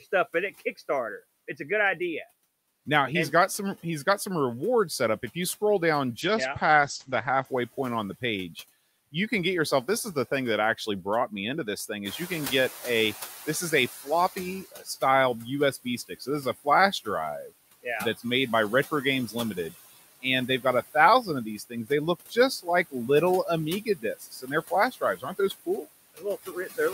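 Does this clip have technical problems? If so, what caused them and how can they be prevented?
Yes. The noise suppressor runs across the whole clip, cutting what it judges to be steady noise by about 15 dB frame by frame. The background dips between phrases and swells beneath them. Preventing it means using a quieter microphone position or a gentler suppression setting so less reduction is needed.

A call bitrate drop occurs from 6.22 to 7.51 s, between "you scroll down" and "point on the page". The encoder falls from 64 to 14 kbps, with the lowest rate lasting 1.2 s, and the audio bandwidth narrows from 20 kHz to 8 kHz. That passage sounds muffled and coarser. A steadier network connection, or a congestion controller that lowers the rate less abruptly, would prevent it.

The noise suppressor is caught up short from 12.04 to 14.64 s, just after "me into this thing". The room noise jumps by about 15 dB around 12 s, which is part of the recording itself. 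The suppressor's estimate takes 2.6 s to adapt, so the noise comes through with less reduction at first and then sinks by about 12 dB. A faster-tracking noise estimator would shorten the exposed stretch.

Speech is cut by the noise suppressor at 14.04 to 14.89 s (about 13 dB), 15.72 to 17.07 s (about 16 dB), 19.27 to 19.58 s (about 8 dB), 20.22 to 21.91 s (about 15 dB), 22.30 to 23.09 s (about 14 dB) and 23.85 s to the end (about 17 dB). In each stretch the suppressor mistakes quiet parts of the speech for the louder noise, so those parts sound swallowed. Less aggressive suppression, or a model better at separating speech from loud backgrounds, would prevent this.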